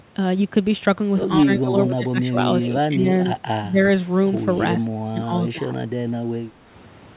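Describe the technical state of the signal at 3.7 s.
At 3.7 s the speech is in the middle of a level dip from 3.64 to 3.79 s, about 150 ms long, where it falls by roughly 10 dB and then recovers. This is likely speech suppressed in double talk: while both ends were talking, the echo canceller could not separate this talker from the loudspeaker echo, so it attenuated both. The band-limited sound, with nothing above 4 kHz, comes from the call codec and is not part of the dip.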